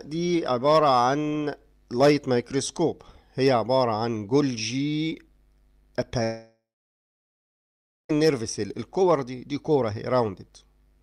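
From 6.23 to 8.11 s the sound trails off as a fading buzz, then falls silent for about 1.5 s, likely a long network dropout rather than a brief packet loss.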